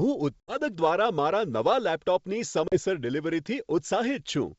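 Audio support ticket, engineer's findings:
Hard-edged dropouts at 0.40–0.59 s and 2.68–2.78 s, with brief distortion on return. Packet loss on the ADPCM call: about 80 ms and 40 ms filled with silence, decoder predictor and step size desynced, recovering over tens of milliseconds.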